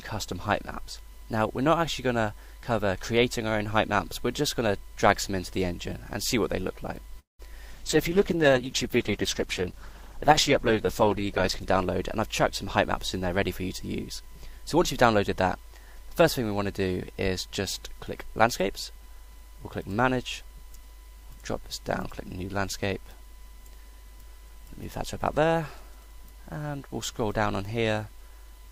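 At 7.19 s the audio stalls for about 0.2 s in what sounds like a call audio freeze. The last sound smears into a brief fading buzz, then goes silent for about 160 ms before picking up where it left off, most likely because packets were held up and the jitter buffer ran dry.

From 7.74 to 11.73 s there's a call bitrate drop, with the encoder pushed down from 128 to 12 kbps and sitting at the bottom for about 3.9 s. Everything turns coarse and watery, and the top end gets cut off, so it sounds muffled until the rate climbs back.

Then come two jitter buffer speed-ups, at 11.80 to 13.44 s and 14.19 to 15.71 s. The receiver trims tiny pitch-period slices to drain the backlog, about a tenth of a second the first time and a little less the second, so the sound runs about 5% fast at unchanged pitch and feels slightly hurried.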